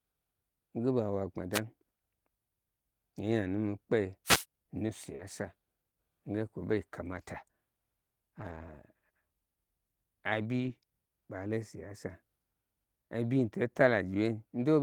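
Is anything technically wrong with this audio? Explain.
Yes, there are three kinds of fault in this speech.

Wireless microphone noise hits occur at 1.52 to 1.60 s and 4.25 to 4.45 s. The radio signal fades as reflections cancel. Receiver noise then rises and breaks through. Each sounds like a short swish of static over the speech.

A short concealed packet loss runs from 5.15 to 5.21 s. About 40 ms of audio never arrived in time. The decoder extended the preceding sound to fill it, then blended back. It is heard as a brief smear or wobble.

Lost packets rebuilt from error correction appear at 5.19 to 5.21 s, 7.13 to 7.23 s, 8.39 to 8.73 s, 10.59 to 10.69 s and 13.39 to 13.41 s. The rebuilt stretches last from 20 ms up to 180 ms, which fits runs of 20 ms packets. A following packet carried a low-bitrate copy of each missing one, and the decoder played that copy. There is no gap, but those moments sound rougher and noisier.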